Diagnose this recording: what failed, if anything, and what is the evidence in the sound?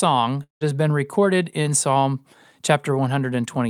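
Network stage: a likely long network dropout stopped packets from 0.43 to 0.64 s, losing 180 ms of speech behind a fading buzz, then silence.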